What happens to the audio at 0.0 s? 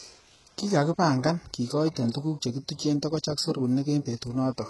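From the very start at 0.0 s the speech carries heavy damage that runs through the whole clip, likely from HE-AAC compression at a bitrate around 12 kbps. The treble above the core band is rebuilt by copying lower bands upward, so s sounds turn gritty and metallic, and nothing remains above 11.5 kHz.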